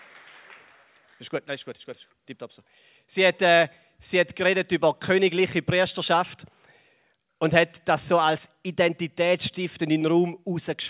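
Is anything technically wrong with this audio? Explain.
No, nothing here sounds technically wrong, so there's nothing to flag.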